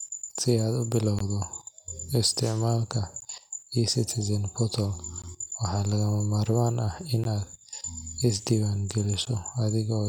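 The speech drops out briefly at 1.19, 3.20, 5.22, 7.24 (just after "ah in") and 9.25 s: a gap at a join of encoded pieces every 2 s, roughly 16 to 18 ms of padded silence left between separately encoded chunks.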